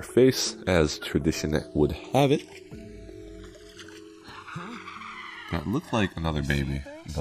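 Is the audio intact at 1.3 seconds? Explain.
No. Channels drifting apart affects the whole clip, including 1.3 s. The two channels run on clocks that disagree by around 200 ppm, so the delay between them keeps sliding, reaching roughly 1.5 ms by the end. Summed to mono, the comb notches sweep slowly, heard as a slow flanging.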